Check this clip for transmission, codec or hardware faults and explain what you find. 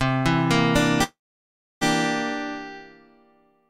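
A transmission fault is present: a call audio freeze from 1.03 to 1.83 s. The last sound carries on briefly and fades, and then comes about 0.67 s of silence before the audio resumes exactly where it stopped. Likely cause: packets held up in transit, leaving the jitter buffer empty. Unlike a packet-loss dropout, nothing is missing. About 0.78 s is inserted, so everything after it arrives that much later.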